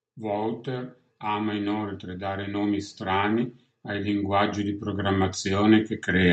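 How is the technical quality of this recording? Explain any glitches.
The speech has one clear fault, a slow level climb over the whole clip. From 0.19 s to the end, automatic gain rising lifts voice and background together, since the gain control judged the input too quiet. The waveform envelope and the spectrogram's noise floor brighten steadily, while the call codec's band stops near 8 kHz.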